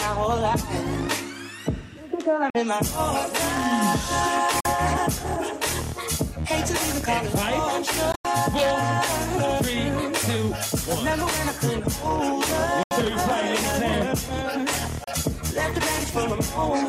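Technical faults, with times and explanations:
2.50–2.57 s, 4.60–4.66 s, 8.12–8.26 s, 12.83–12.93 s, 15.04–15.09 s: Bluetooth dropouts, likely from late wireless packets. Sharp-edged silent gaps appear as blank vertical bands in the waveform and spectrogram, and the sound resumes further along.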